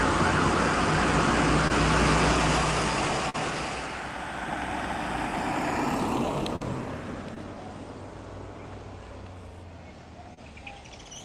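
The audio has short concealed packet loss at 1.67, 3.30, 7.34 and 10.34 s, brief smeared patches where the receiver extended the last sound, seen as stretched spectrogram frames; at 3.30 s the playout delay also shifts by about 20 ms. A burst of packet loss at 6.56–6.62 s drops about 40 ms, bridged by the receiver continuing the last sound and fading it down, which appears as a decaying waveform segment.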